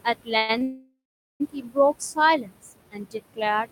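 Throughout the clip the background rises and sinks with the speech, leaving a residue. These are noise suppressor artifacts: the suppressor pulls down bands it judges to be steady noise, here by about 20 dB, against room noise sitting about 13 dB below the speech.

From 0.04 s to the end, soft sounds and word edges come across faint or swallowed, dipping by up to about 22 dB. This is speech cut by the noise suppressor, which mistook quieter parts of the speech for noise and turned them down with the background.

From 0.37 to 0.51 s the sound hangs briefly and fades for about 114 ms before resuming where it stopped. This call audio freeze likely comes from packets held up in transit, leaving the jitter buffer empty while the receiver extended the last sound.

At 0.59 to 0.63 s a sound is held about 20 ms too long. This short stall from a late packet happened because the jitter buffer ran dry and the receiver stretched the previous sound until the packet arrived. 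Nothing is missing.

From 0.63 to 1.42 s a longer hold of about 772 ms fades out, with roughly 430 ms of it silent, before the audio picks up again with nothing lost. This second call audio freeze likely reflects a longer delivery delay that drained the jitter buffer, inserting a gap into the stream.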